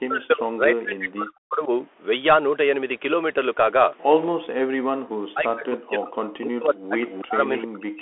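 Bluetooth CVSD headset codec, throughout the 8 s clip: the speech is carried as a one-bit, slope-following stream, which fits a 64 kbit/s CVSD link, confined to roughly 300 Hz to 3.4 kHz, with nothing above 3.7 kHz. Its damage is plainly audible: a granular hiss under the speech, scratchy sibilants, and roughness where loud high content outruns the adapting step size.

Speech suppressed in double talk, from 0.00 to 1.72 s, 4.42 to 6.13 s, and 6.34 to 6.98 s: the speech sinks, at its deepest by around 40 dB, and thins or breaks into pieces, with about 1.5 s affected in each of the first two spans. The likely cause is an echo canceller that could not tell the near talker from loudspeaker echo during simultaneous talk and attenuated both.

Echo leak, at 7.08 to 7.23 s and again at 7.57 to 7.64 s: short scraps of a delayed copy arrive 307 ms behind the original, roughly 10 dB and then 15 dB below the speech. 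This is likely residual echo from a loudspeaker end that its canceller failed to remove and sent back down the line.

Speech suppressed in double talk returns from 7.21 to 7.41 s and from 7.65 s to the end, with the same deep ducking and loss of level as the earlier spans.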